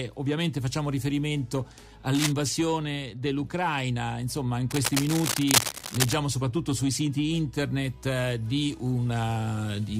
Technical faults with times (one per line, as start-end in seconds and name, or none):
2.15-2.32 cable scratch noise
4.70-6.14 cable scratch noise